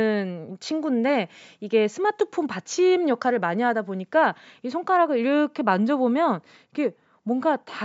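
No technical faults are present in the speech; it has passed through ordinary call microphone processing, which trims the lowest bass, as expected for that path.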